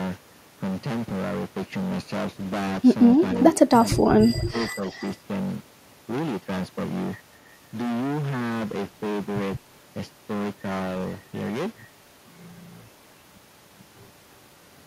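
Hard clipping runs through the whole speech clip, and it's heavy: the level going in was about 22 dB more than the stage could pass, so roughly a fifth of the samples hit the ceiling and got sliced flat. Those squared-off peaks throw harmonics way up the spectrum, which gives a harsh fuzz on every loud syllable rather than the occasional crackle you'd hear with a milder overload.

From 3.18 to 3.59 s there's an echo leak: a delayed copy of the speech, about 278 ms behind and about 15 dB down, most likely because the far end is on a loudspeaker and its echo canceller let some of its mic pickup slip back. A shorter scrap follows at 3.85 to 3.93 s, about 20 dB down.

Straight after, from 3.94 to 4.55 s, the speech gets suppressed in double talk. With both ends active at once, the canceller likely couldn't tell the local talker from the returning echo and pulled everything down. The level dips and drops out in pieces, as deep as about 30 dB, adding up to around half a second.

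The echo leak comes back at 4.38 to 4.67 s and again at 4.91 to 5.1 s, still about 280 ms late but fainter now, about 25 dB below the speech.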